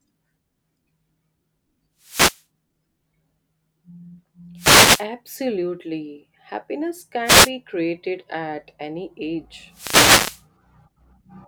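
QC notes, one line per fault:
1.99–2.44 s, 4.56–5.06 s, 7.24–7.51 s, 9.70–10.44 s: wireless microphone noise hits. Four short swishes of static break into the speech, recurring roughly every 2.5 s and lasting from about 0.27 s to 0.75 s. The analogue FM radio link fades as reflected signals cancel, and the receiver's hiss rises over the voice. On a spectrogram, each hit is a broadband noise patch smearing across the speech harmonics. On the waveform, it is a fuzzy, raised noise floor.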